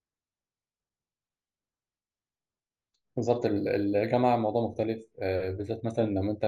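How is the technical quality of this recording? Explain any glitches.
The recording has one audible fault, imaging from linear upsampling, from 3.46 s to the end of the clip. Across that stretch the top of the speech band turns dull, and a faint metallic shimmer rides on sibilants. The sound points to a rate conversion, fitting 16 kHz raised to 48 kHz, done by straight-line interpolation between samples. That crude filter softens the highs and leaves a mirrored copy of the spectrum in the 8 to 16 kHz region, roughly 40 dB below the speech, which produces the shimmer.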